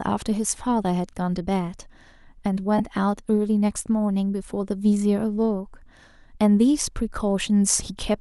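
At 2.78 to 2.80 s, about 15 ms of lost LE Audio frames, consistent with two dropped frames. The LC3 decoder refilled the gap with the previous spectrum under random signs, giving a brief noisy smear. A spectrogram shows harmonics blurring into broadband texture; the waveform loses its periodic shape there.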